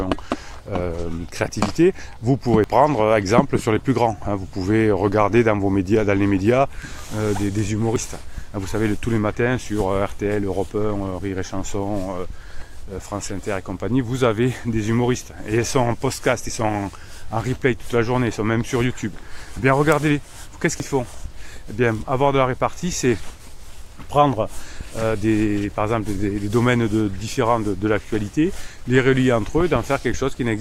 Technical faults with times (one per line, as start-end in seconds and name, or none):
2.64 dropped buffer (overrun)
7.96 dropped buffer (overrun)
20.80 dropped buffer (overrun)